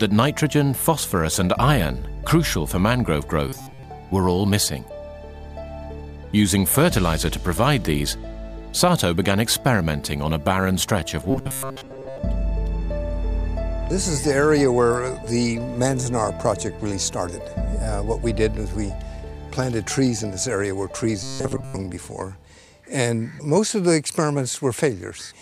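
At 3.49 to 3.83 s, 11.31 to 12.18 s and 21.23 to 21.77 s the sound collapses into a rigid, metallic buzz pitched at 134 Hz: robotic sound from repeated short buffers. It is likely caused by audio arriving too late, so a slice of about 7.5 ms is looped while most of the real material is skipped. Unlike a plain dropout or a stutter, the sound keeps roughly following its shape under that fixed drone.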